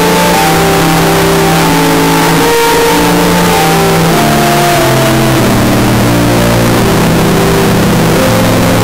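The 16-bit samples were likely read with signed and unsigned mixed up, so every zero crossing jumps full scale, giving loud, harsh distortion throughout, with quiet passages blaring.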